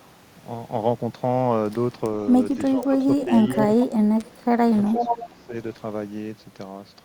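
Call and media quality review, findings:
Speech suppressed in double talk, 2.77–3.31 s, 3.56–4.74 s and 4.93–5.54 s: voice ducks by up to about 15, 25 and 20 dB. Likely echo canceller attenuating the near talker during overlap.

Echo leak, 3.49–3.56 s and 4.96–5.26 s: voice returns 466 ms late, about 15 dB then about 5 dB below speech. Likely residual loudspeaker echo passing the far-end canceller.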